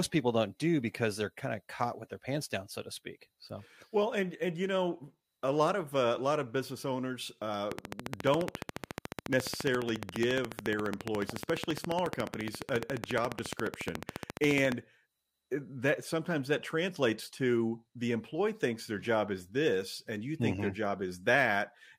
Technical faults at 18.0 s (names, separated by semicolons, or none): none